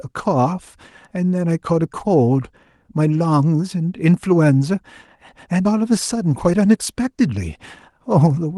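Nothing in this speech goes wrong at any point; it simply carries the gentle softening of a call codec, with the top end rolling off around 12 kHz, which fits audio that travelled over a normal Opus call.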